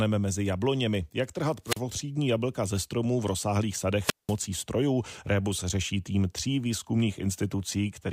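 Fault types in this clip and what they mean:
Wireless microphone squelch dropout: at 1.64 and 4.01 s the radio link fades, hiss swells, then the receiver squelch mutes for 38 and 190 ms.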